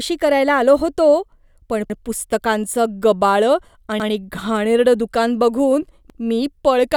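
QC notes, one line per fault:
1.90–2.00 s, 4.00–4.10 s and 6.10–6.20 s: overlapping chunks. This speech was cut into 2-second blocks, and each new block begins 100 ms before the previous one finished. That 100 ms slice therefore plays twice at every join. Each seam gives a brief click or stutter, first right after "होतो पण", then after "पुस्तकांचं गबाळं", and last after "घाणेरडं दुकान बघून". The steady 2.1-second spacing shows it is a chunking fault.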